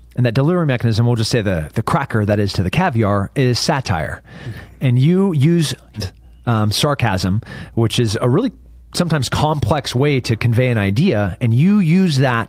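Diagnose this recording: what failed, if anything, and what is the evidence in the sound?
The network and jitter buffer stage failed here, with a skip ahead at 5.95 s. After "you use", about a second of speech was dropped, either in transit or when the jitter buffer overflowed with later audio already queued. Playback jumps straight to that later audio with no silence or fill between. The two sides of the cut are butted together, so the speech lurches forward and a chunk of the sentence is simply absent.

Right after the jump, from 5.99 to 9.20 s, there is a jitter buffer speed-up. The buffer was still holding more audio than its target, so the receiver trimmed its excess by cutting out short pitch-period-sized slices over and over, around 0.4 s in total. Speech in that stretch runs at about 112% speed while the pitch stays where it was, which makes the talker sound hurried.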